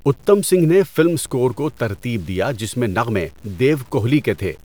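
From start to finish the speech carries a grainy, signal-following distortion consistent with low bit depth without dither. The roughness rides on every syllable and vanishes with it, sitting roughly 35 dB below the signal, so quieter passages sound gritty and soft tails crumble or break up instead of decaying smoothly. The likely cause is the audio being truncated to around 8 bits with no dither, so the rounding error stays locked to the waveform instead of spreading out as a steady hiss.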